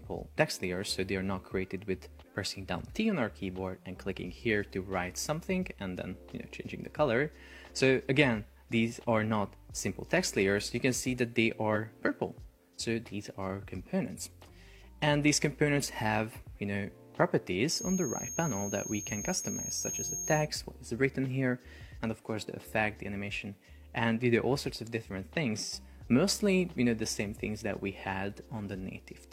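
At 11.71 to 11.73 s there is a brief glitch from damaged data in a compressed stream: corrupted frames made the decoder lose sync. From 17.64 to 20.50 s a thin 6.5 kHz feedback whistle sits roughly 10 dB below the sound, likely a speaker-to-microphone loop held just short of runaway.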